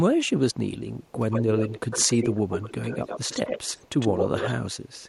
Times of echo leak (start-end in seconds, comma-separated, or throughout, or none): 1.30-4.55